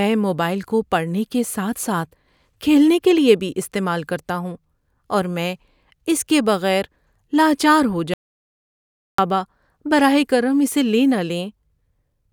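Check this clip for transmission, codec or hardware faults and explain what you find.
One fault turns up in this speech. At 8.14 s, right after "کے بغیر لاچار ہو", the sound drops to complete silence with no room tone until 9.18 s, then resumes mid-flow. That is an audio dropout to silence, likely a lost input or link while the recorder kept writing zeros, so about 1.05 s of speech is gone.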